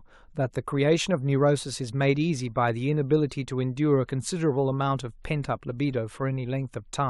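No technical faults can be heard anywhere in the speech.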